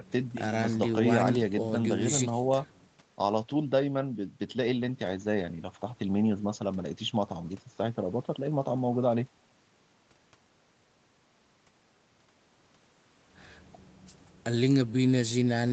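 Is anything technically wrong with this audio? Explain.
No, nothing in this speech recording stood out as a technical problem on listening.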